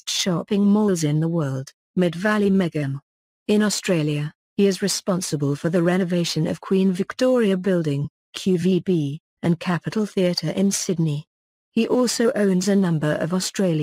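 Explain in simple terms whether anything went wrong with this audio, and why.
Nothing went wrong here; there's no dropout, glitch, distortion or other fault to flag anywhere in the recording.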